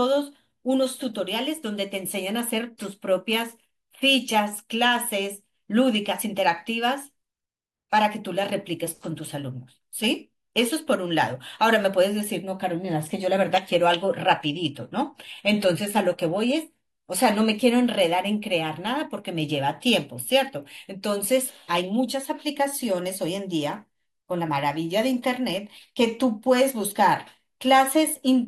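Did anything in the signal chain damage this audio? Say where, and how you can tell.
Yes, there's an adaptive stream at a lower bitrate from about 13.54 s to 17.54 s, so a network-driven switch that shows up as codec damage. The speech suddenly loses its crisp top end, and the highs turn synthetic and swishy, with more artefacts, then snap back four seconds later with no gap either side. That fits the player dropping from a roughly 96 kbit/s AAC rung to a 24 kbit/s HE-AAC one while the connection sagged.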